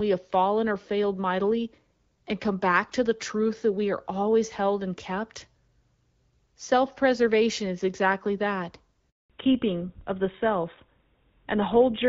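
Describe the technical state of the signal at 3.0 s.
At 3.0 s the signal is intact, with nothing beyond the light, steady coloration of the AMR wideband (HD Voice) codec path at about 12.65 kbit/s.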